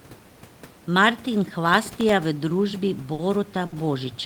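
From 1.70 to 2.13 s, just before "v družbi", processor overload crackle: several tiny buffers of well under a millisecond missed their deadlines and were left as silence. The result is gritty tearing, not a held sound. At 3.13 to 3.21 s, right after "v družbi", and again at 3.66 to 3.75 s, there is a short stall from a late packet. The jitter buffer ran dry, so the last sound was stretched for 50 ms and then 60 ms. It is a held sound with a slight buzz or dip rather than crackle, and nothing is lost. Room noise stays about 22 dB below the speech.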